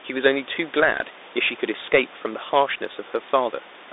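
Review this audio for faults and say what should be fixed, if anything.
Bluetooth CVSD headset codec damage runs throughout. The speech is held to 300 Hz–3.7 kHz, and the one-bit delta coding, which fits a 64 kbps CVSD link, makes s sounds scratchy over a granular hiss. A spectrogram shows a hard ceiling at 3.7 kHz. Prevent it by recording through a wideband or wired microphone path.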